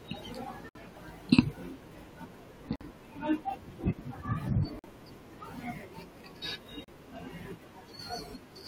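Speech, interrupted four times by hard-edged holes of silence at 0.69 s (61 ms), 2.76 s (50 ms), 4.79 s (47 ms) and 6.84 s (35 ms). The spacing of roughly two seconds points to 2 s stream segments. This is a gap between stream segments: the timestamps of adjacent segments leave a short hole that the player fills with silence, so time is inserted into the speech rather than any audio being removed.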